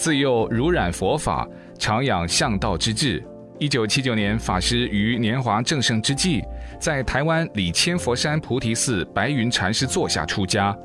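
Nothing stood out on listening to this clip.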